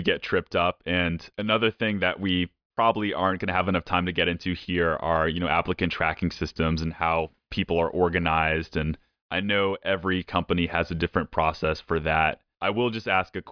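No technical faults are audible.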